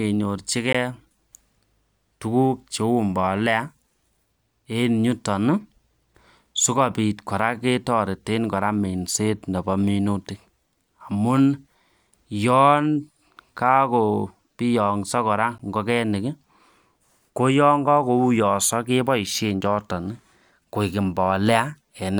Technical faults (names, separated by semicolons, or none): block of digital silence